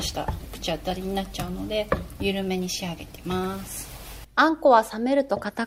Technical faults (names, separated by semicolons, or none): none